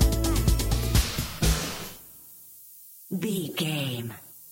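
From start to finish, the audio is carried at a low bit depth with noise shaping, with the quantisation coarse enough to suggest only about seven bits per sample. The rounding error from each sample is fed back into the next, pushing the error energy out of the middle frequencies and up toward the top of the band. The result is a steady, thin hiss sitting roughly 20 dB below the signal, growing sharply brighter and more prominent in the highest frequencies.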